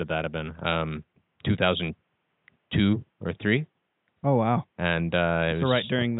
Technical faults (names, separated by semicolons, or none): none